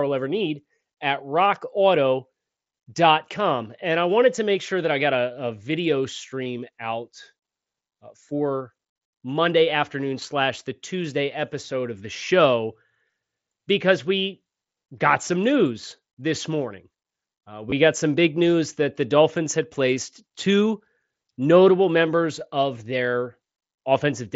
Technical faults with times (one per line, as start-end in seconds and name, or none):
6.44 concealed Bluetooth headset packet loss
17.70 concealed Bluetooth headset packet loss